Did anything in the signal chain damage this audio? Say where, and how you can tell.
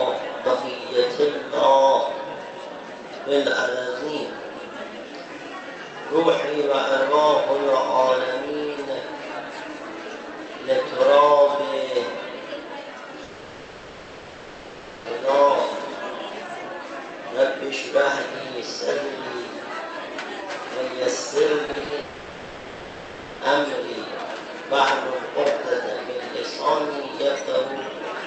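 Yes, the network stage. A long network dropout, likely from lost packets, runs 13.23 to 15.09 s and again 22.00 to 23.42 s. Concealment smears the last sound into a fading buzz, visible as blurred, stretched spectrogram bands.

Repeated packet loss (robotic sound) hits 21.66 to 21.92 s. Five gaps of up to 20 ms each get patched with repeated sound, which shows as choppy seams in the waveform.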